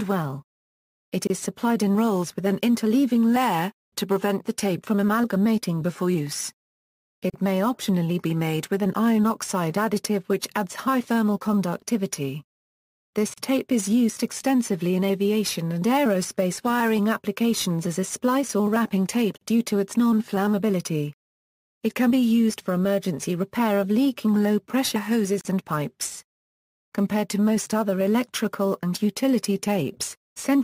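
At 1.27, 7.30, 13.34, 19.38 and 25.41 s there's a gap at a join of encoded pieces: the sound drops out for about 28 ms the first time and 37 ms after, every 6 s, because each separately encoded piece kept its leading delay and padded tail.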